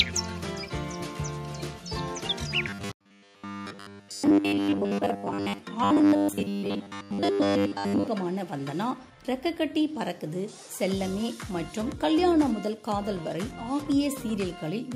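From 2.68 to 5.59 s and again from 5.84 to 8.08 s, the sound becomes a rigid metallic buzz fixed at 100 Hz: robotic sound, likely from repeated short buffers of about 10 ms replacing most of the real audio. The steady pitch distinguishes it from choppy dropouts.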